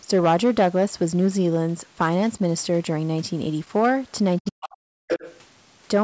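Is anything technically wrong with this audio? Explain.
Yes, this speech clip has three problems.

Hard clipping runs through the whole clip. Loud syllables carry a gritty crackle where their peaks are sliced flat. The signal drives about 7 dB past what a stage could pass, so a small share of samples hit the ceiling and the flattened tops spray harsh upper harmonics, up to the 8 kHz limit of the call's band.

Speech suppressed in double talk appears from 4.38 to 5.1 s. The talker's voice sinks very deeply for most of that stretch. The likely cause is an echo canceller that heard both parties at once, could not tell its own talker from the loudspeaker echo, and ducked everything.

The other side's voice leaking through comes in two stretches, likely from loudspeaker echo the canceller failed to remove. From 4.48 to 4.76 s a second voice sits well below the talker. From 5.08 to 5.4 s it returns nearly as loud as the talker's own speech.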